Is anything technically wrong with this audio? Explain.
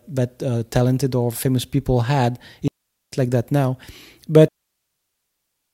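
Yes. Digital wireless dropouts cut the speech twice: from 2.68 to 3.12 s, between "or famous people had" and "like that now", and from 4.48 s to the end. The receiver lost too much data, faded quickly and muted, leaving clean near-silent holes with no noise bursts.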